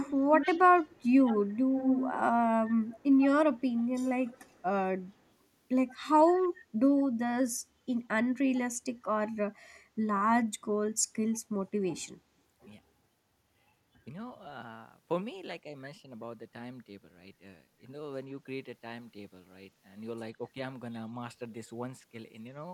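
A loudspeaker-side echo canceller likely failed to remove what its microphone picked up, causing echo leak. A copy of the speech trails 125 ms behind. It is nearly as loud as the speech from 0 to 2.19 s, then returns as fainter scraps at 2.85–3.25, 3.58–3.84, 4.25–4.63, 5.88–5.95, 6.37–6.48 and 7.0–7.04 s.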